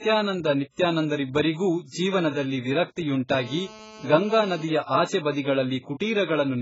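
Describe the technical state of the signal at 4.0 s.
At 4.0 s the speech carries a GSM phone buzz, running from 3.30 to 4.65 s. A nearby 2G handset on a call is transmitting in bursts about 217 times a second, and the audio circuitry rectifies those pulses into a hard, raspy, nearly steady buzz about 20 dB below the speech. On a spectrogram it appears as a comb of evenly spaced horizontal lines at 217 Hz and its many harmonics.

Throughout the clip, including this moment, the speech sounds heavily dulled and smeared, with warbling on sustained sounds and fizz on sibilants, and nothing is present above 7.6 kHz. The likely cause is AAC compression at a very low bitrate, around 12 kbps. A spectrogram shows a sharp ceiling at 7.6 kHz.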